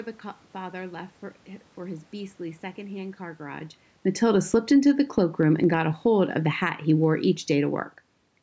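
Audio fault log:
4.08 to 4.93 s and 5.48 to 8.04 s: automatic gain falling. After "car garage", the gain control drops about 8 dB, then about 4 dB more. Sound and background sink together.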